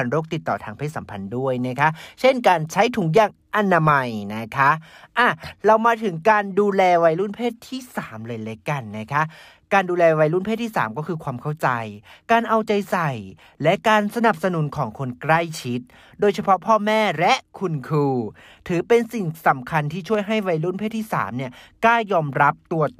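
At 20.15 s a single sharp click cuts through the speech, most likely from dropped samples: a fraction of a millisecond of the stream went missing, so the waveform jumps abruptly to a later value, drawn on a spectrogram as one thin vertical line spanning all frequencies.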